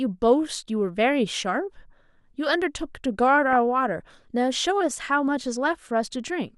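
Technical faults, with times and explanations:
3.51–3.56 s, DAB burbling: a brief burst of burbling over the speech lasting about 50 ms. Weak reception let a bit error rate of about 0.2% through the error correction, corrupting the MP2 audio data, so short blips of noise appear in single sub-bands.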